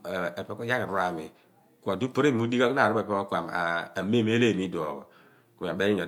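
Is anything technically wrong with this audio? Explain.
No, nothing is technically wrong with this speech recording. There is no fault here to describe or explain.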